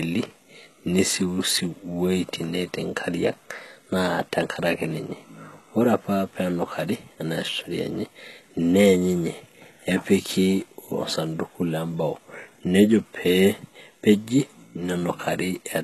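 Speech with plainly audible HE-AAC compression throughout, likely from encoding at a very low bitrate, which fits roughly 16 kbps. The treble is rebuilt by band replication, so s sounds come out gritty and metallic. A spectrogram shows nothing above 12.3 kHz and blocky, repeated-looking upper bands.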